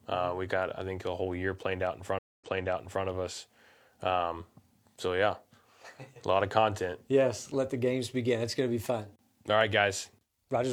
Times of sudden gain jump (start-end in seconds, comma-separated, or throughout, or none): none